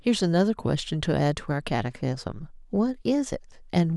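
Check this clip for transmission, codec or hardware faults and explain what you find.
No faults can be heard in this speech recording.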